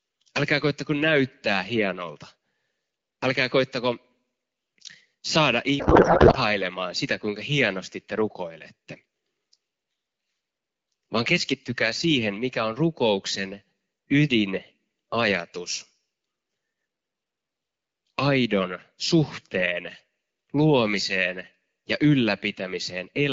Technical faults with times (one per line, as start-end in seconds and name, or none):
5.79-6.38 codec payload misread